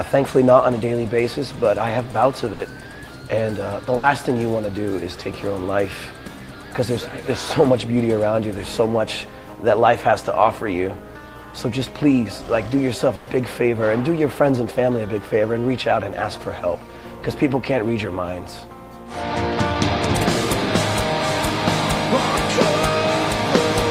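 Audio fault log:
2.53–2.62 s, 3.97–4.06 s and 13.15–13.30 s, burst of packet loss: the sound briefly freezes into a continuation of its last moment, heard as either a held buzz or a fading hiss that drops in level, then jumps ahead. Lost or late packets left gaps that the receiver filled by extending and attenuating the preceding audio, for 60 ms in the first two and 120 ms in the third. An equal span of the original audio is skipped each time.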